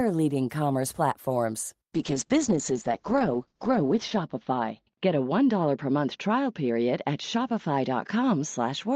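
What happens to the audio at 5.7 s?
At 5.7 s the speech is inside a call bitrate drop that runs from 1.99 s to the end of the clip. The encoder's budget fell from 40 kbps to 8 kbps, spending its lowest rate for about 1.6 s, so the audio band shrinks from 20 kHz to 8 kHz and what remains is coded coarsely. The result sounds muffled and watery-rough, not merely dull: a plain low-pass filter would darken the sound without the grainy, smeared texture.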